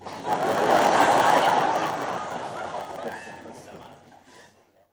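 Sounds, with a block size mismatch (padded) running through the whole clip. One stage hands over shorter blocks than the next stage expects. The missing part of each block is filled with silence. That opens a tiny gap every 10 ms, heard as a steady 100 Hz buzz over everything. The gaps also stretch the timeline. The audio plays at 0.919 times normal speed, yet the timbre stays.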